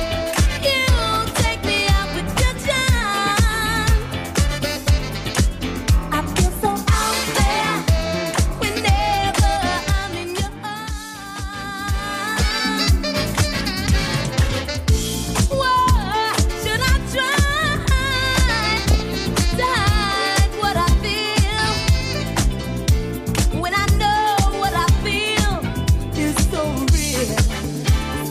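DAB burbling breaks into the audio three times: at 12.28 to 12.42 s, at 18.72 to 19.20 s, and at 25.03 to 25.15 s. Each burst adds short blips of noise over the programme. Weak reception let a small fraction of bit errors, a few tenths of a percent, slip past error correction into the MP2 data. Corrupted samples then put short blips of noise in single sub-bands, and corrupted scale factors make sub-bands jump in level for up to a frame. On a spectrogram this appears as scattered rectangular blocks of sudden energy in narrow bands, each lasting up to a frame.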